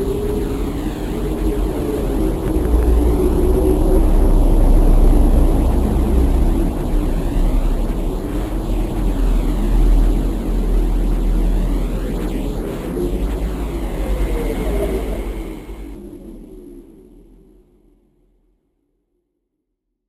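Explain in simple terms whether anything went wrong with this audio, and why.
Nothing went wrong here.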